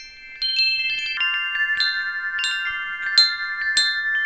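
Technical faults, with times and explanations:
1.17 to 4.25 s, wrong sample rate: the sound drops about seven semitones and slows to two-thirds speed, pitch and tempo sinking together. Samples are being played slower than they were captured, without conversion, which fits 24 kHz material played back at 16 kHz.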